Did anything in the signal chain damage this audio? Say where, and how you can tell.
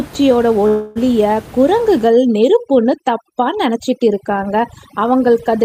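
Yes. From 0.67 to 0.98 s, a call audio freeze at the network stage stretches the last sound into a fading buzz, likely from a jitter buffer running dry. The spectrogram shows smeared, decaying harmonics, and the audio resumes intact but about 282 ms late.

From 2.07 s to the end, overdone noise removal in call processing affects the background. The room noise, about 19 dB below speech, drops and breaks up, and the spectrogram shows twinkling isolated specks.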